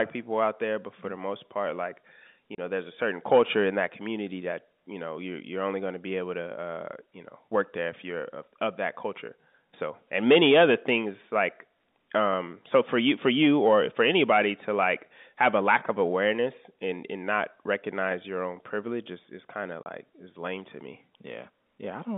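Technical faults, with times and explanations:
2.55–2.58 s and 19.83–19.86 s, packet loss filled with silence: the telephone-band speech cuts to a hard-edged 30 ms hole after "the most part like" and after "is is kind of". Each gap fits one lost 30 ms packet that the receiver replaced with silence.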